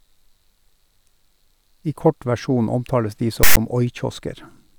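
At 3.43 s, just after "omtales de", the speech breaks into a burst of file tags played as audio. It lasts until 3.57 s, about 140 ms. A block of tag data sits inside the sample stream, and the player decodes it as sound. The text bytes come out as a loud, harsh rasp, pushed off-centre because character codes are mostly positive values. The zero padding that follows plays as dead silence. Both edges are abrupt.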